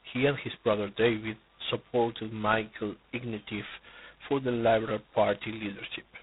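Throughout the speech, G.726 ADPCM at 16 kbit/s leaves a harsh, rasping hiss that rises and falls with the speech level, unlike steady background noise. Only two bits a sample code the prediction error, and nothing passes above 3.9 kHz.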